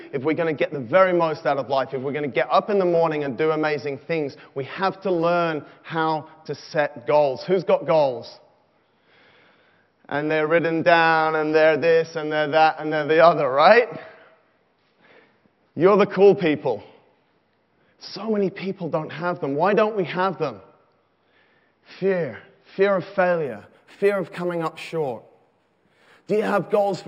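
From 23.45 s onward, imaging from linear upsampling: straight-line interpolation leaves a faint mirrored band at 6 to 12 kHz, about 35 dB down on a spectrogram, heard as metallic shimmer.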